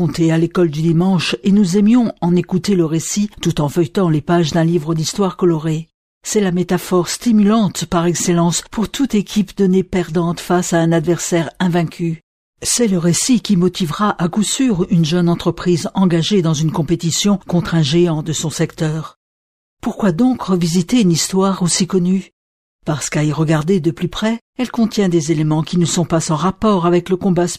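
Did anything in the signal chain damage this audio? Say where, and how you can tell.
No, nothing audible points to damage at any stage of the chain.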